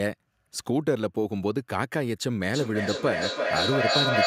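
From 2.54 s to the end there's feedback echo between two devices: the speech loops back roughly every third of a second, and the repeats build to about 2 dB above the original.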